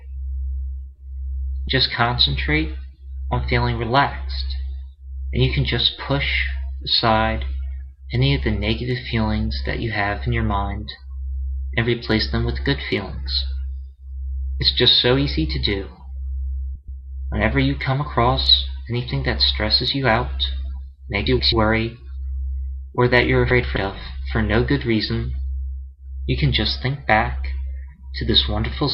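Three short stretches, at 16.76 to 17.01 s, 21.26 to 21.52 s and 23.50 to 23.77 s, show frames out of order. In each, two adjacent blocks of about 128 ms were decoded in swapped sequence, so the later half plays before the earlier one, which fits runs of four frames each. The result is a brief garbled flutter, and no time is lost.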